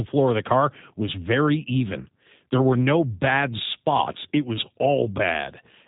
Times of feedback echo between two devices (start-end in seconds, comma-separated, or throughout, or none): none